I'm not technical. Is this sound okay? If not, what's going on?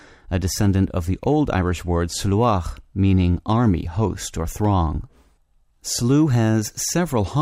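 Yes, nothing in this speech recording stood out as a problem on listening.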